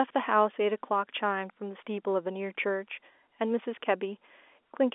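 No faults are present in this speech clip; it carries the narrow telephone band of G.711 A-law coding, with nothing above roughly 3.5 kHz.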